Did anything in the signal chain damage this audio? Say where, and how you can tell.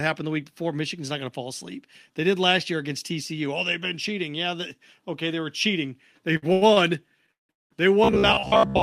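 Yes. Repeated stalls (stutter) from the network and jitter buffer at 6.33–6.78 s, right after "okay they were cheating": four short gaps, longest 90 ms, filling roughly two fifths of that span. The audio drags but nothing is lost.

Call audio freeze at 7.32–7.51 s and 7.51–7.72 s: each is one long hold, mostly silent. Unlike the stutter, the audio fully stops and then resumes intact, likely from packets delayed on the network.

Robotic sound from repeated short buffers from 8.04 s to the end: a rigid buzz near 67 Hz, which fits a repeated 15 ms buffer. Unlike a freeze, most of the real audio is skipped, likely from a starved playback buffer.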